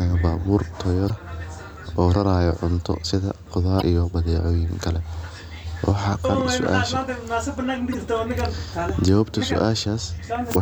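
Speech, interrupted five times by brief bursts of damaged data in the compressed stream, each lasting about 44 ms: at 1.06–1.10 s, 3.78–3.82 s, 6.21–6.25 s, 7.91–7.95 s and 10.52–10.56 s. Each is a short chirp, squawk, click or hole where the decoder hits corrupted frames, misreads them, loses frame sync and has to hunt for the next valid header before clean decoding resumes.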